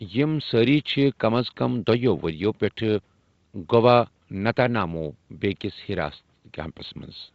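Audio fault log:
No faults heard anywhere in this speech recording.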